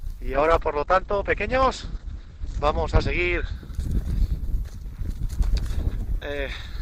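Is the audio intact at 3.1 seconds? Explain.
No. The sound is muffled and rough at 3.1 s, inside a call bitrate drop from 0.35 to 4.99 s: the encoder falls from 48 to 10 kbps, cutting the top end from 20 kHz to 8 kHz.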